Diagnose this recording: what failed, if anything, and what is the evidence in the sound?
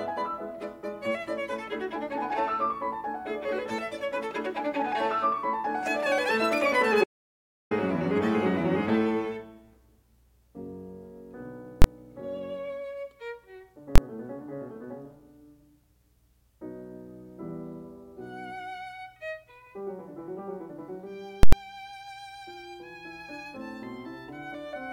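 Audio dropout to silence: the music stops dead at 7.04 s and resumes at 7.71 s, leaving about 0.67 s of digital silence with no noise floor. The input feed was likely lost upstream, from a dropped device or link, while the recorder kept writing silence.

Invalid numbers at full scale, in the processing or sample-format conversion stage: single loud bangs at 11.82 to 11.84 s and 13.96 to 13.98 s, each about 23 ms, which fits a 1024-sample block. At 21.43 to 21.53 s, a roughly 93 ms span, consistent with a 4096-sample block, gives a hard pop at each edge with nothing between. A calculation produced infinite or invalid values that were pinned to maximum amplitude for the whole block.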